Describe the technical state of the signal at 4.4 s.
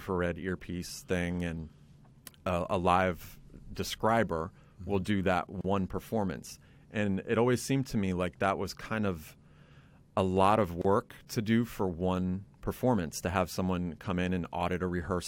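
Nothing at 4.4 s points to a fault: the speech signal is intact at that moment.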